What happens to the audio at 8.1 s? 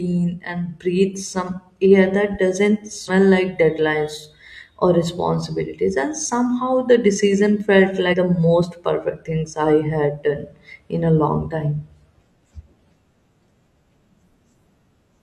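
Right around 8.09 to 8.14 s the speech jumps forward: compressed frames skipped. A couple of frames never got decoded, so about a tenth of a second is simply missing, which fits frames of roughly 43 ms. At the join the speech cuts abruptly from one point to a later one.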